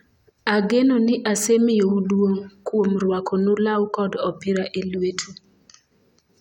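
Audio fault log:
No fault can be heard anywhere in this speech clip. There is nothing to log at any point.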